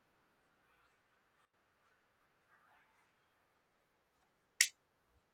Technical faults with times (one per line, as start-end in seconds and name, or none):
1.45-1.54 sudden gain jump